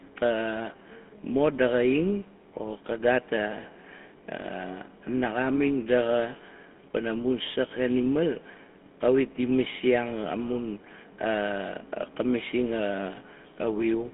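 A buzzy, gravelly roughness sits on the speech from start to finish, with a thin, boxed-in tone: the line band runs from about 200 Hz to 3.4 kHz and nothing survives above 3.7 kHz. That is the GSM full-rate codec at work, a character that fits its 13 kbps rate. It rebuilds each voice from a vocal-tract model fed by a coarse, regularly spaced pulse train, and that sparse excitation leaves the plainly audible grit.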